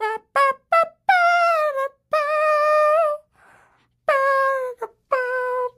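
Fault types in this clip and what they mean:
Gain pumping: the gain swings by around 5 dB, pulled down under every loud sound, likely from excessive input gain driving a fast limiter. The waveform looks squashed.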